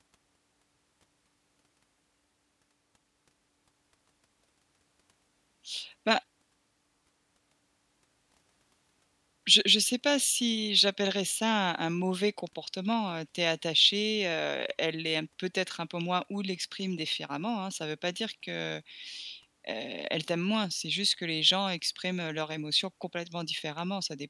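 Speech recording with no audible technical faults.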